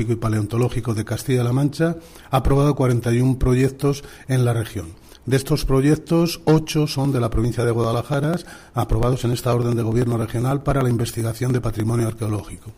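From 6.95 s to 12.69 s the audio carries periodic USB or driver dropouts. A tick sounds about every 0.099 s, roughly ten times a second, around fifty in all. Each one loses about a millisecond of sound. Nothing fills the gap. The audio just skips ahead, so the waveform jumps and clicks. The even spacing points to a background task that stalls the USB bus or audio driver on a fixed cycle.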